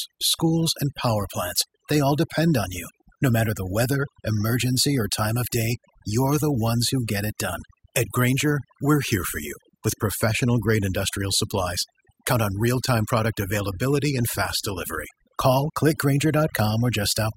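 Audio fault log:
Throughout: overdone noise removal. Noise reduction was pushed too hard, so individual frequency bands near the estimated noise floor were cut away along with quiet speech detail. The background drops and breaks up into twinkling specks. On a spectrogram the gaps between words show as dark voids scattered with isolated bright dots, and the speech harmonics look patchy and broken up.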